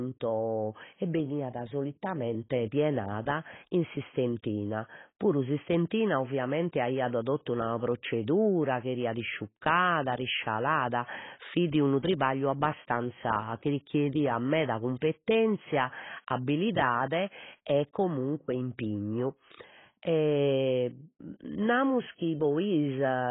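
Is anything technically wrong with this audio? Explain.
Yes, the speech is heavily degraded by what is likely AAC compression, present from start to finish. Nothing is reproduced above 3.8 kHz, so the sound is dull and muffled, and sibilants turn fizzy and smeared. This fits AAC-LC at a very low bitrate, around 16 kbps: the encoder drops the upper band and coarsely quantises the rest. On a spectrogram this shows as a hard ceiling at 3.8 kHz.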